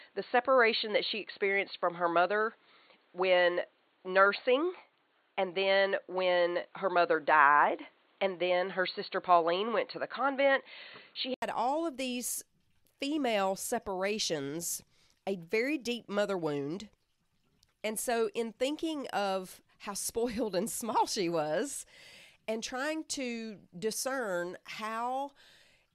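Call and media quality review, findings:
Input switched to a poorer device, 0.00 to 11.42 s. Speech band-limited, nothing above 4.4 kHz. Dull, boxy tone. Fresh background noise, roughly 45 dB under the speech. Brief 80 ms gap at 11.42 s, then full bandwidth returns with a level change of about 5 dB. Likely cause: capture routed through a narrowband device, such as a headset call profile, then back to the main microphone.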